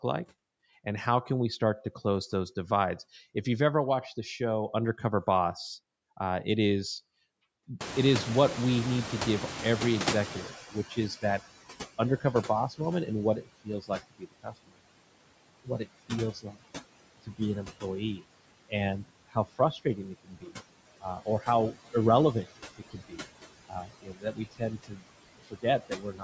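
Speech run through a call's noise suppressor, which lowers every band it judges to be steady noise by about 20 dB, frame by frame, across the whole clip. These are noise suppressor artifacts: the background sinks in the gaps and swells back under the talking. Little reaches above 8 kHz, as expected from the call microphone processing. Around 8 s the room noise jumps by about 25 dB, settling about 13 dB below the speech. The suppressor's noise estimate lags, so this is the noise suppressor catching up. From 7.8 s to 11.49 s the louder background pushes through with less reduction at first, then sinks to about 18 dB down as the estimate adapts over roughly 3.7 s, which is heard as a slow fade of the noise rather than a clean cut. While it is still adapting and afterwards, the suppressor mistakes parts of the speech for noise, producing speech cut by the noise suppressor. Between 10.48 and 11.4 s a brief stretch of about a fifth of a second drops by about 15 dB. 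From 11.98 to 14.79 s around a second of speech is pulled down by as much as about 22 dB. From 15.64 to 16.61 s a few tenths of a second fall by up to about 20 dB. From 17.22 s to the end, roughly three seconds in all dip by up to about 21 dB, leaving parts of the speech swallowed or faint.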